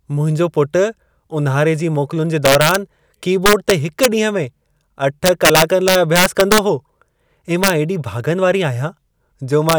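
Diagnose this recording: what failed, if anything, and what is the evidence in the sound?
Integer overflow in the sample-format or gain stage cracks the speech at 2.45–2.76, 3.46–4.06, 5.26–6.58, 7.64–7.70 and 9.69–9.74 s. Peaks driven about 1 to 6 dB past full scale wrap to the opposite sign instead of limiting, giving violent cracks harsher than clipping.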